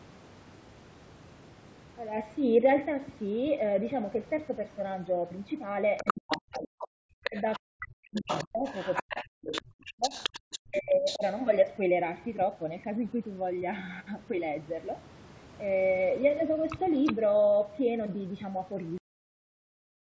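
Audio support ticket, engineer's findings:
Other side's voice leaking through, 5.97 to 6.87 s. Second voice at about the talker's own level. Likely cause: residual echo, meaning the far end plays from a loudspeaker and the echo canceller leaves part of it in the mic signal. Leak returns 7.24 to 11.36 s. Weaker there, roughly 10 dB under the talker.

Speech suppressed in double talk, inside the leak windows: 6.03 to 6.89 s, 7.23 to 8.65 s, 9.03 to 10.14 s, 10.56 to 11.23 s. Talker dips as much as around 40 dB. Affected time per window roughly half a second to one second. Likely cause: echo canceller cannot split near talker from far-end echo while both speak, so it attenuates both.

Cut-off end at 18.98 s. Speech stops mid-sound and drops straight to digital silence, no decay, through to the end of the file. Final buffers never written or played out. Capture or recording pipeline terminated before flushing. 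Band limit with nothing above 8 kHz and the trimmed low bass are consistent with call mic processing. Not part of this fault.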